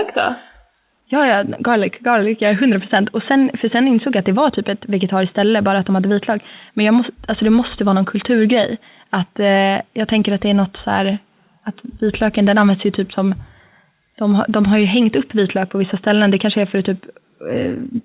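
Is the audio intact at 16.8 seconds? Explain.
Yes, the speech at 16.8 seconds is intact, carried cleanly through the WebRTC call path with its narrowband sound and nothing above 4 kHz, as expected from the G.711 A-law codec.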